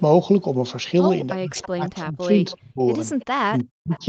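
From 1.36 to 2.81 s, speech is suppressed in double talk, likely because the echo canceller could not tell the near talker from the loudspeaker echo while both sides spoke and pulled the whole signal down. Over about a second within that span the speech dips and breaks into pieces, at its deepest about 35 dB quieter. The same happens from 3.46 to 4.02 s, with roughly 0.4 s affected and a drop of about 40 dB.

Echo leak appears at 1.56 to 1.68 s, 2.51 to 2.57 s, 3.19 to 3.26 s and 3.89 to 4.00 s. Loudspeaker sound likely reached the microphone and got past the canceller, so a copy of the speech returns about 0.33 s late. Each leak is a short, faint scrap, about 20 dB below the speech in the first and last, and about 25 dB below in the middle two. Across the clip, the audio has nothing above 8 kHz, as expected from the call's Opus path.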